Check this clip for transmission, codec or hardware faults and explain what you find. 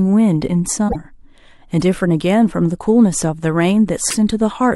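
There are two short glitches in this speech, at 0.88–0.96 s and 4.09–4.14 s. At each one the audio skips forward and then gives a brief garbled burst or a gap, about 80 ms the first time and 50 ms the second. That's likely a broken MP3 bit reservoir. Frames were dropped, so the next frames reached back into their predecessors for borrowed bits and decoded the wrong data. The burst lengths work out to roughly two or three frames of about 26 ms each.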